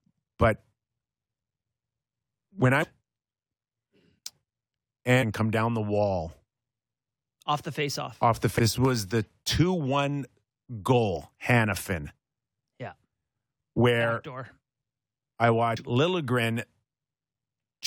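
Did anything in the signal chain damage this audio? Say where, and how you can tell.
Yes, damaged data in a compressed stream at the codec stage: corrupt frames threw the decoder out of sync, leaving short blips at 2.82–2.84 s, 5.21–5.24 s, 8.58 s and 15.76 s.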